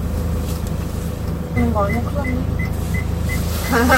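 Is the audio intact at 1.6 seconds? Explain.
No. At 1.56 s there is damaged data in the compressed stream: the decoder misreads corrupted frames and loses sync until the next frame header, producing a brief disturbance such as a chirp, squawk, click or short hole.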